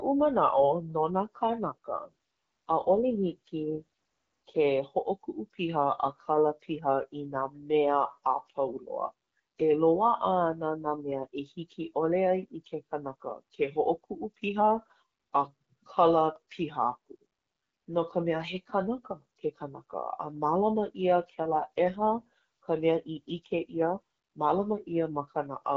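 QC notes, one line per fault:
1.94–4.67 s and 21.19–23.99 s, AMR rate drop: the speech turns rougher and more synthetic, then recovers. The sound fits the AMR-WB codec stepping down from 12.65 to 8.85 kbit/s. Unlike packet loss or a bandwidth drop, there is no gap and the band stays full.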